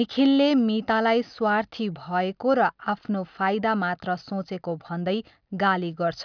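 No technical faults detected.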